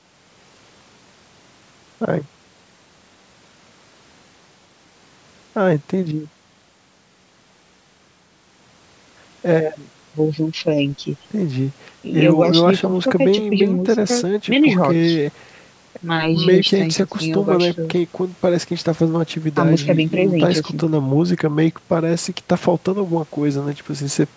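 No technical faults can be heard in this speech.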